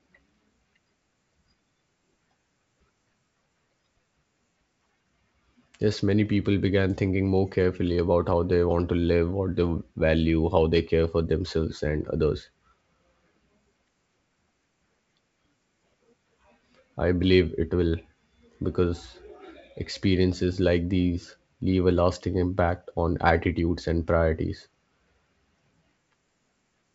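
No technical faults are audible.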